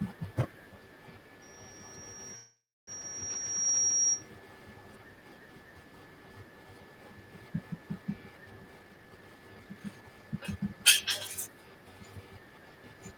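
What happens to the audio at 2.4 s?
At 2.4 s a loudspeaker feedback squeal is sounding: a 5.7 kHz tone from 1.42 to 4.30 s that swells over roughly two seconds to about 10 dB above the speech as the mic-speaker loop exceeds unity gain. A call audio freeze also runs from 2.35 to 2.90 s. The last sound is stretched into a fading tail that drops to silence for about 0.28 s, then the speech resumes where it stopped, adding about 0.52 s of delay with nothing lost. Packets likely stalled and emptied the jitter buffer.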